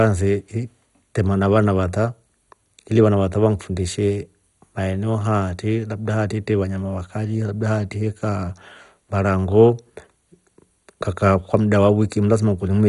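Throughout, the speech sounds dull and gurgling, nothing above 11.2 kHz, with granular distortion; likely MP2 compression at a low bitrate, starving upper sub-bands of bits.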